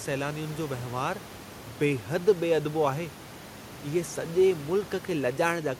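The speech signal shows no technical faults, and the room noise of the recording space sits about 20 dB below it.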